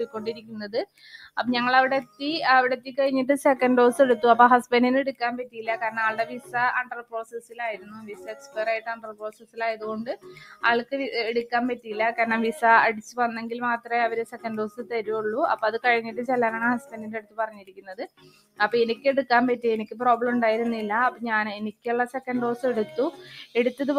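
A speech-tuned noise suppressor runs over the whole clip, misreading sustained tones and tails as noise, so the level pumps and thins with swings of roughly 10 dB. Sound cut by the noise suppressor sinks sharply at 0.06–2.94 s (about 16 dB), 5.1–10.63 s (about 18 dB), 13.79–14.92 s (about 14 dB), 16.06–20.0 s (about 18 dB), 21.11–22.21 s (about 18 dB) and 23.12–23.56 s (about 10 dB), with held sounds dropping while attacks pass.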